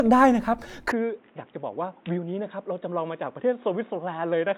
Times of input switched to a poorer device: 0.92-4.58

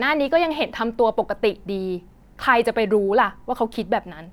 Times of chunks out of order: none

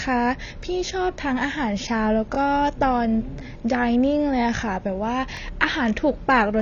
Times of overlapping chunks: 2.35-2.37, 5.37-5.39

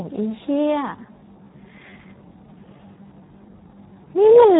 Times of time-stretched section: 0.92-4.59

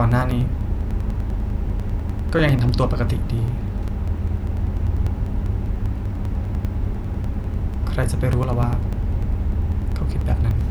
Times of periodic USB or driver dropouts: 0.12-10.61

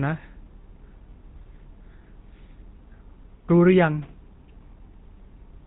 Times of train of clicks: none

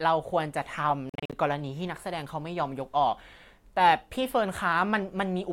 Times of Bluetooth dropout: 1.09-1.33

